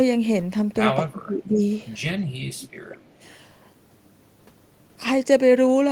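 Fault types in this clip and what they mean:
Speech suppressed in double talk, 1.04 to 1.61 s and 2.89 to 2.95 s: the speech sinks while the far side is apparently also talking, most likely because an echo canceller could not tell this talker from its own loudspeaker echo and damped everything. The first stretch is deep, dropping roughly 25 dB for about half a second. The second is a brief, shallow dip of about 5 dB.
Echo leak, 2.6 to 2.68 s and 2.97 to 3.01 s: short, faint scraps of the voice return about 211 ms after the original, likely because a loudspeaker-side echo canceller let part of its microphone pickup through and sent it back. The first scrap sits roughly 25 dB below the speech, and the second is much weaker, near 40 dB down.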